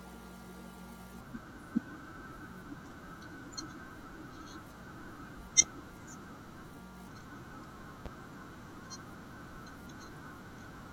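At 5.62 to 5.65 s and again at 8.06 to 8.09 s, a single loud pop cuts through the speech, each one a sharp click-thump peaking about 15 dB above the surrounding level while the talking carries on underneath. The likely cause is a brief voltage pulse, from a switch, static or a driver glitch, entering the signal chain. On the waveform each shows as a narrow spike towering over the speech envelope; on a spectrogram, a thin vertical broadband stripe.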